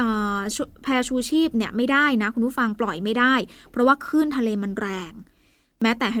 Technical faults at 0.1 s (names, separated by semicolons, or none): none